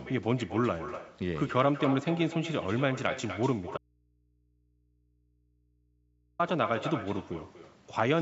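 All the way through, there's echo with no canceller: your speech comes back about a fifth of a second later, about 11 dB down and thinner. From 3.78 to 6.39 s there's an audio dropout to a faint residue, with the speech abruptly gone for 2.6 s and only mains hum far underneath, likely the signal lost while the input stayed live.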